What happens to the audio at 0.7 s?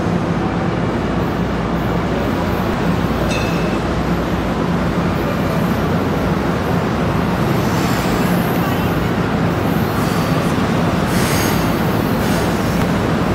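Nothing goes wrong at 0.7 s; the audio there is intact.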